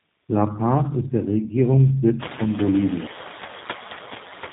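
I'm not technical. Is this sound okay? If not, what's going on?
No, there are two problems running through the whole clip.

The first is tandem speech coding. The speech sounds rough, a bit muffled and slightly warbly, and everything above about 3.8 kHz is missing, so it has that flat, boxed-in phone quality. This happens when a call passes through two phone systems in a row that each squeeze the voice in their own way. The second one (the final link sounds like G.729A) has to work from a copy that was already damaged, so the flaws pile up.

The second is noise suppressor artifacts. A cleanup feature is trying to push the background noise down, but only a little, so the leftover noise shifts in level as the speech starts and stops. The room noise itself is ordinary background sound that gets noticeably louder from around two seconds in, which gives the cleanup more to struggle with.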